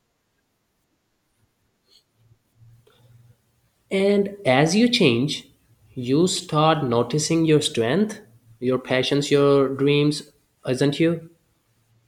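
No faults audible anywhere in this speech recording.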